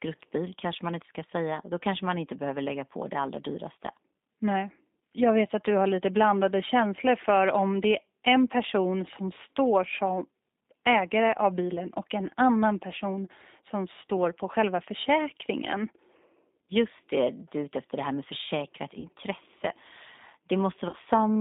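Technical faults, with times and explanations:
Throughout, G.729 codec. The speech is squeezed into a telephone band of roughly 250 Hz to 3.7 kHz, with nothing above. At 8 kbit/s the codec rebuilds each frame from a filter, a pitch guess and a few pulses. Its damage is plainly audible as a rough, synthetic edge.
19.00 to 19.09 s and 20.89 to 20.96 s, VoIP packet loss concealed by the speech codec. The first comes right after "det här med försäkrat". Each gap points to two lost packets, about 40 ms of audio. The decoder repeats its last pitch and filter at falling gain, so the sound smears into a brief fading tone or noise. It recovers only gradually afterwards.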